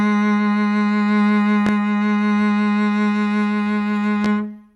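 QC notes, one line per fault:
1.67–1.70 s and 4.25–4.28 s: loud pop. Each is a single sharp pop of about 40 ms, the first roughly 15 dB above the music and the second roughly 10 dB above it, while the music carries on unbroken beneath both. A sudden voltage step or pulse has been added to the signal, likely from a connector, switch, static discharge or driver glitch. The following circuitry shapes it into a brief transient heard on top of the audio, not a gap in it.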